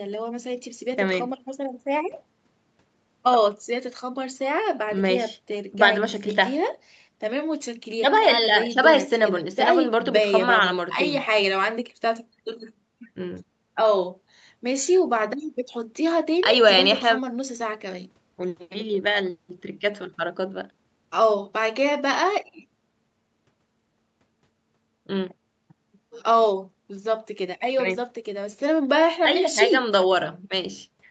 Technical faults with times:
none

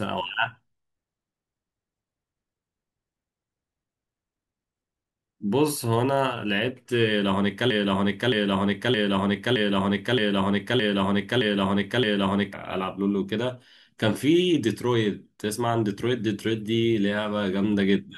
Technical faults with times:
7.70-12.53 broken-record loop

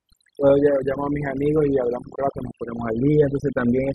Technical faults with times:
0.00-3.95 overdone noise removal

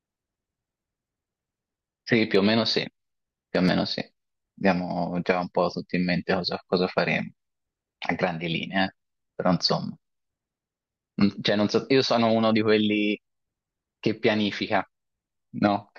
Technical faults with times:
3.55-3.71 loud pop

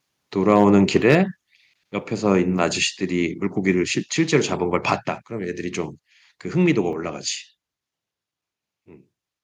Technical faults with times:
0.50-0.64 microphone overload
0.96-1.15 microphone overload
1.02 microphone volume stepped down

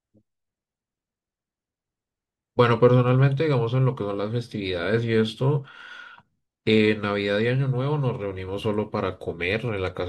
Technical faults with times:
none

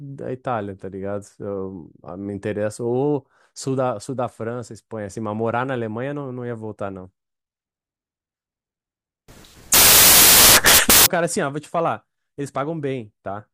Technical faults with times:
9.28-11.06 samples built from the wrong bytes

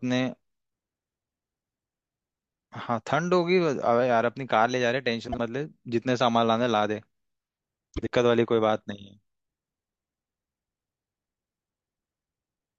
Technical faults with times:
5.28-5.39 frames out of order
7.96-8.07 frames out of order

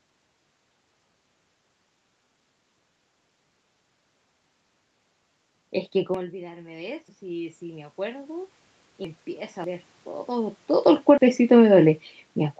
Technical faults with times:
2.99 dropped buffer (overrun)
6.14 dropped buffer (overrun)
6.25-8.59 automatic gain rising
7.08 dropped buffer (overrun)
9.05 dropped buffer (overrun)
9.64 dropped buffer (overrun)
10.72-12.59 automatic gain falling
11.18 dropped buffer (overrun)

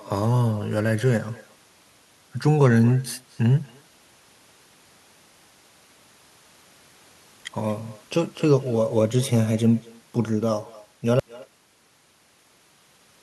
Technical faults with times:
0.00-13.22 echo with no canceller
11.20-13.22 audio dropout to silence

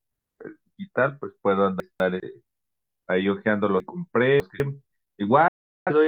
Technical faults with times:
1.80-2.20 chunks out of order
3.80-4.60 chunks out of order
5.48-5.91 digital broadcast dropout

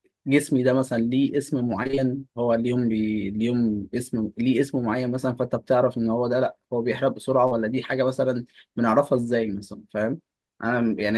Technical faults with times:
1.83-1.99 repeated packet loss (robotic sound)
7.47-7.53 short concealed packet loss

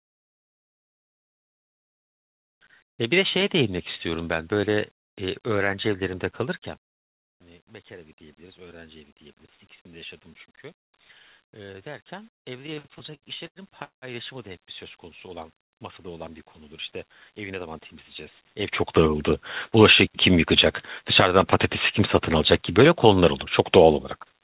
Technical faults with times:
12.59-14.05 repeated stalls (stutter)
16.99-17.96 jitter buffer speed-up
23.90-24.34 jitter buffer speed-up

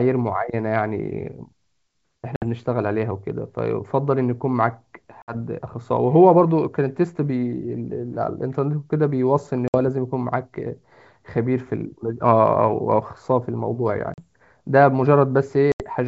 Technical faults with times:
2.36-2.45 packet loss on an ADPCM call
5.22-5.35 packet loss on an ADPCM call
9.68-9.76 packet loss on an ADPCM call
14.14-14.23 packet loss on an ADPCM call
15.72-15.86 packet loss on an ADPCM call

